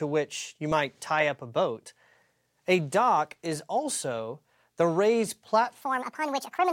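At 5.81 s, right after "is also the raised", the last stretch of speech runs to the end of the clip at the wrong speed. Playback jumps to 1.64 times the original rate. Pitch climbs with it, by roughly ten semitones. The voice turns thin, chipmunk-like and rushed. Syllables crowd together. The change is abrupt, with no gradual ramp. This section at the wrong speed is likely from an edit or player using the wrong clock.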